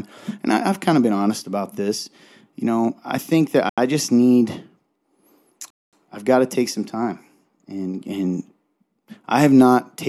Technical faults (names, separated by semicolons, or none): Bluetooth stall